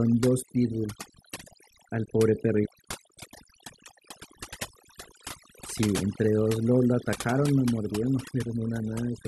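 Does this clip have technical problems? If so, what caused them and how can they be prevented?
Yes, there's overdone noise removal across the whole speech clip: the denoiser was pushed so hard it's clamping individual frequency bands whenever they sit near its noise estimate, so quiet parts of the voice vanish too, leaving twinkly specks in near-silence. Easing the reduction amount and capturing a cleaner recording in the first place would prevent it.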